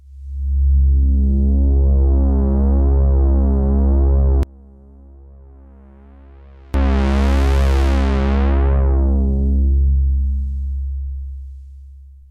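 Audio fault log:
4.43–6.74 s, one channel inverted: the sound suddenly falls by about 28 dB, leaving a faint residue rather than silence, which points to the likely cause being one channel flipped in polarity so their shared content cancels in mono; a plain gain drop would keep full body.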